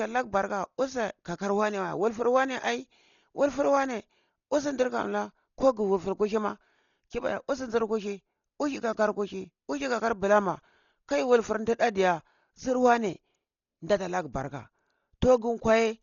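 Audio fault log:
Throughout: Dolby Digital compression, likely; speech is dull, nothing above 6.9 kHz, with rough fluttering noise, fitting a very low bitrate around 32 kbps leaving many lines dither-filled.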